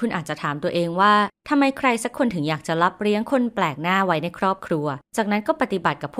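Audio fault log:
No faults found in the speech path at any point in the clip.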